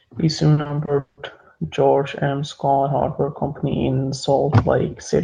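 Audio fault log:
0.53–1.19 s, repeated packet loss (robotic sound): the speech breaks up into choppy fragments here, with what sounds like five separate dropouts packed into about two thirds of a second. Each hole gets papered over by stretching out the last bit of sound, roughly 300 ms of patching in total, the longest single gap running 180 ms. With close to half the stretch concealed, the repeats stack up and give that buzzy, robotic edge.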